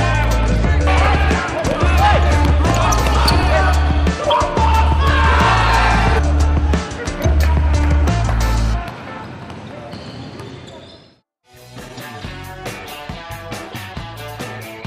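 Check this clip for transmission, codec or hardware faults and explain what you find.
Four brief bursts of a corrupt frame decoded fault are audible, at 0.56 s, 4.29 to 4.32 s, 7.22 s and 11.88 to 12.02 s. Damaged bits in a compressed frame reached the decoder, which played the frame anyway. Misread gains and codes put energy at the wrong frequencies for the length of the frame. Each event is a chirp or noise blip. The loudest, near 4.3 s, peaks around -5 dBFS, and the others sit around -20 to -25 dBFS. The longest, near 12 s, suggests a few consecutive frames were hit.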